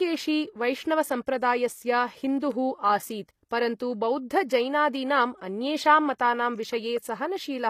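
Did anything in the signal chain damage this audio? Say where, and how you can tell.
Yes. At the codec stage, the whole clip has plainly audible damage. The treble is bright but synthetic, and sibilants sound gritty and lisping, likely from HE-AAC compression at a bitrate around 24 kbps. A spectrogram shows blurred, copied-looking upper bands and nothing above 15 kHz.

Pre-echo, also from the codec, comes before attacks at 4.48 s and 6.18 s. A short hiss leads each attack by about 19 ms and 11 ms, which softens the onset. On the waveform, low noise rises ahead of each transient, and the spectrogram shows a broadband smear in front of it.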